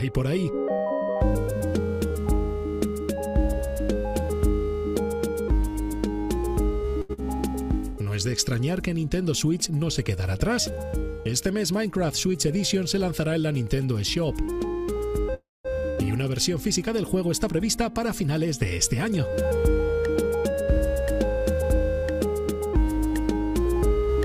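A run of receive-side jitter buffer faults affects the audio. At 7.01 to 7.11 s there is a short stall from a late packet: the buffer ran dry, and the receiver stretched the last sound for 78 ms until the packet turned up, then carried on from the same point. Nothing is lost, but the sound is held too long with a slight buzz or dip, and playout delay grows by 78 ms. Right after, at 7.13 to 7.20 s, comes a short concealed packet loss. About 60 ms of audio never arrived, and the receiver covered the hole with 44 ms of extrapolated signal before blending back into real audio, heard as a brief smear or wobble, with delay shrinking slightly. From 11.71 to 12.49 s a jitter buffer speed-up runs playback at 108% with pitch unchanged. The buffer held more than its target, so short pitch-period slices were cut out repeatedly, about 70 ms in total, and the passage sounds slightly hurried. At 15.34 to 15.67 s a call audio freeze is heard: the last sound continues as a decaying buzz or hiss, then about 200 ms of silence, before the audio resumes exactly where it stopped. 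The likely cause is packets held up in transit, emptying the buffer. No audio is missing, but 304 ms of gap is inserted and delay rises by the same amount. At 15.90 to 15.99 s a burst of packet loss follows: about 80 ms of audio is gone, replaced by 70 ms of concealment that holds and fades the preceding sound before playback jumps ahead past the missing part. Finally, from 17.55 to 22.04 s, a second jitter buffer speed-up plays at 104%. Roughly 200 ms is trimmed across that span, and the sound runs slightly fast at unchanged pitch.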